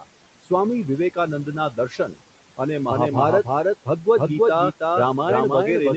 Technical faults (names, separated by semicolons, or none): noise suppressor artifacts; speech cut by the noise suppressor; doubled audio track